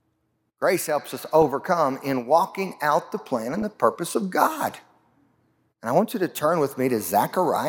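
A speech clip with short bursts of noise blips at 1.30 to 1.42 s and 3.54 to 3.62 s: DAB burbling, where weak reception let bit errors corrupt MP2 sub-band levels.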